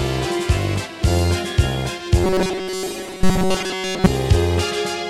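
Robotic sound from repeated short buffers runs from 2.24 s to 4.06 s: the audio turns into a rigid, metallic buzz at 188 Hz, with most of the passage made of repeats. This is likely from a starved buffer looping about 5.3 ms fragments.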